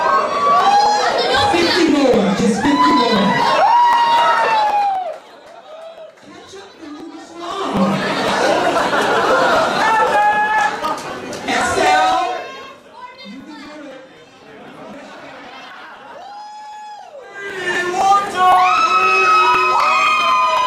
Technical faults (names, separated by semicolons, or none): zipper noise